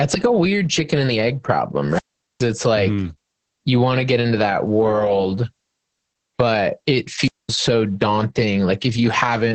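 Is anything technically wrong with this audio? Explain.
Yes, two faults are audible.

Throughout, the speech carries Opus voice compression. The band stops near 8.5 kHz and the voice sounds hoarse and faintly robotic, which fits the SILK coder at roughly 10 kbps coding the excitation coarsely. Plain low-pass filtering would dull the sound without this grainy texture.

There are two wireless microphone squelch dropouts. The first runs from 1.89 to 2.49 s, after "chicken and the egg", and the speech returns at "like mm you want". The second runs from 7.19 to 7.56 s, after "but it". In each, hiss swells as the radio signal fades. The receiver's squelch then mutes the output, for about 0.42 s the first time and 0.21 s the second. The hiss rising before each hole is what separates these from codec packet loss, which cuts out abruptly.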